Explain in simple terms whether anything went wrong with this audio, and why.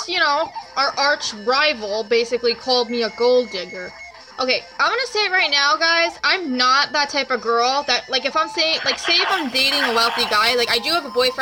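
Something goes wrong near the end. From 9.30 s to the end, a crude rate conversion adds a gritty, fizzy buzz. Samples were repeated instead of smoothly recalculated, which fits a change from 44.1 kHz to 48 kHz. This creates shifted, inharmonic tones that don't belong.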